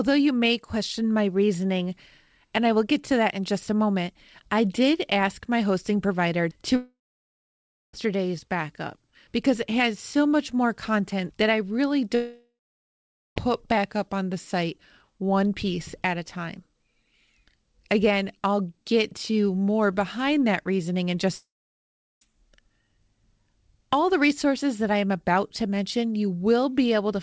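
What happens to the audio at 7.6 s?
At 7.6 s the clip is in the middle of a long network dropout running from about 6.76 s to 7.95 s, likely caused by packets failing to arrive. Right after "my hosting provider to", the receiver stretches the last sound into a brief fading buzz. About a second of near-silence follows, which is where 7.6 s falls. Speech resumes at "backup because it has" with roughly 1.2 s of content missing. On a waveform this looks like a short decaying tail collapsing to a flat line. A spectrogram shows a smeared, fading smear and then an empty column across all frequencies. The G.722 call path's 8 kHz ceiling stays visible on either side.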